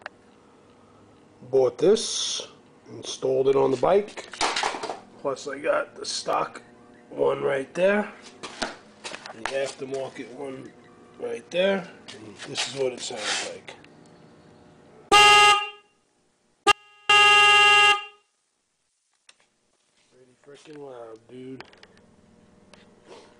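At 16.72 s the audio drops out abruptly for about 0.38 s, leaving only a faint residue of the signal roughly 40 dB down. This is likely an audio dropout, unlike a pause or fade.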